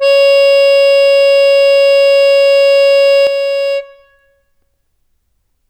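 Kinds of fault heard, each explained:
One channel drops out: from 3.27 s to the end, the music falls abruptly by about 6 dB and stays down, and anything present in only one side vanishes. The likely cause is one stereo channel going silent before both are summed to mono, halving the shared content. On the waveform the envelope steps down to half its height there. The spectrogram darkens evenly across all frequencies at that moment, with any one-sided parts gone.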